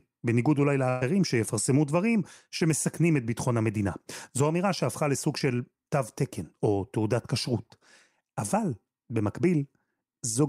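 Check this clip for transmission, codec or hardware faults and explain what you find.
One transmission fault is present in this speech: a burst of packet loss from 0.89 s to 1.03 s. Several consecutive packets arrived too late or not at all, and the receiver concealed the gap for about 117 ms by extending the last decoded sound while ramping it down. There is no true silence. The held sound fades out, and then the speech resumes with roughly 120 ms of the original audio skipped entirely.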